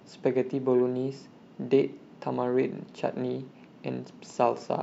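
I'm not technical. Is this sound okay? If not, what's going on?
Yes, this sounds fine.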